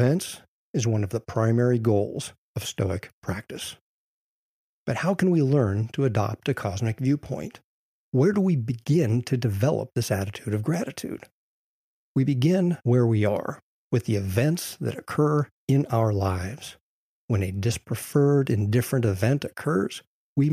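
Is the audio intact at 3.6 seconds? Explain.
Yes, the audio at 3.6 seconds is intact, with no dropout, click, distortion or other fault there.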